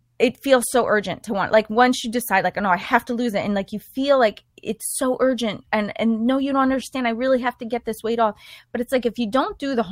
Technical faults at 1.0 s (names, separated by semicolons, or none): none